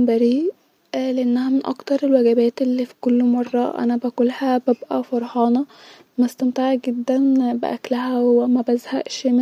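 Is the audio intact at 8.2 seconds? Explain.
Yes, the audio is intact at 8.2 seconds, with no dropout, glitch or other fault audible at that point in the speech.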